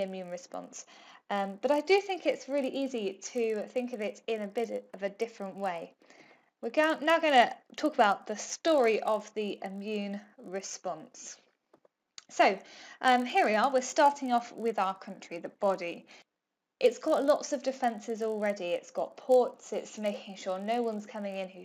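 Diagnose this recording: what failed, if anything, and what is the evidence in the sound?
Resampler restarted on every block, throughout the clip: a 50 Hz buzz rides under the sound and vanishes in gaps. That points to 20 ms blocks resampled independently in the sample-rate conversion stage, likely 16 kHz to 48 kHz, each edge missing its neighbours and leaving a small error.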